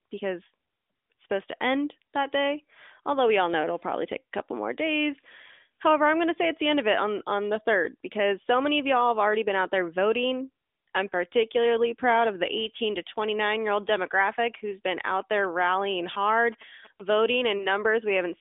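From 15.20 to 17.34 s, just after "old demographic who's been", a nearby 2G phone is sending GSM signalling bursts that the audio circuit rectifies. They come through as a galloping dit-dit-dit of short buzzes at 217 Hz, sitting faint, roughly 25 dB under the speech.

At 17.58 s, lost AMR speech frames interrupt the narrowband AMR line. A radio error corrupted data, and the decoder filled the gap by reusing the previous pitch and vocal tract settings at reduced gain. The result is a short dip or warble that fits a single lost 20 ms frame.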